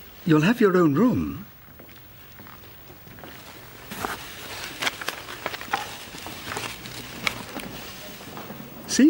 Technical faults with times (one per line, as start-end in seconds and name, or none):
none